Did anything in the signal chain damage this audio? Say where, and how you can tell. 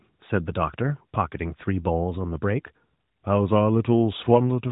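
No damage found anywhere.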